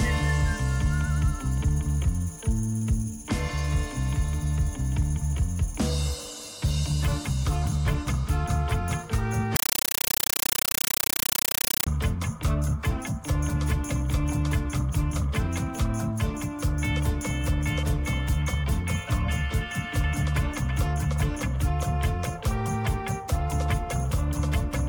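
From 9.56 s to 11.87 s the sound is replaced by very loud, harsh chattering static, a rapid buzz of noise bursts about 8 ms long repeating 31.25 times a second. This is a compressed stream played as audio: an AC-3 (Dolby Digital) bitstream was passed through as if it were ordinary PCM samples instead of being decoded. Each coded frame comes out as a burst of noise followed by zero padding. The noise density fits a 384 kbps stream.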